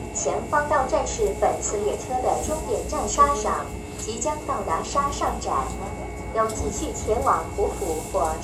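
Generation loss runs throughout the clip. Content is missing above 18.6 kHz, and the sound is swirly, hollow and smeared, with blunted attacks. The likely cause is repeated lossy encoding, about four passes, in a way that fits WMA 1 at 96 kbit/s. Each pass quantises on a shifted frame grid, so noise and spectral holes build up beyond what that bitrate alone would produce.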